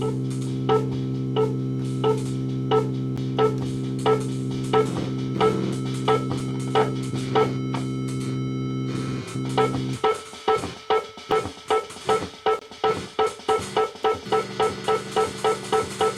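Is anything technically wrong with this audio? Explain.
Yes. There are five blocks of digital silence, at 3.17 s (about 10 ms), 5.37 s (2.3 ms), 6.40 s (1.5 ms), 11.31 s (5.8 ms) and 12.59 to 12.61 s (23 ms). Each time, the output stalls and a short run of silence replaces the sound, most likely because the buffer wasn't filled in time. The lengths of the 11.31 s and 12.59 s gaps fit 256- and 1024-sample buffers. With no fade at either edge, the shorter gaps come across as ticks, and the last one as a brief hole.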